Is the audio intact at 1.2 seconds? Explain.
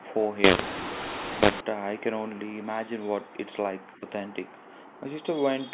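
No. From 0.44 to 1.61 s the speech shows a mu-law and A-law mix-up: A-law telephone samples decoded as mu-law, scrambling levels. It sounds harsh and distorted, with pauses filled by noise. The waveform shows uneven amplitudes and lifted near-silence; the spectrogram shows broadband haze.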